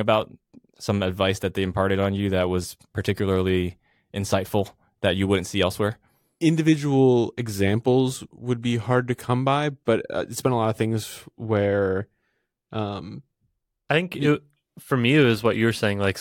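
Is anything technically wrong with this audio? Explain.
No, nothing technically wrong can be heard anywhere in this speech recording.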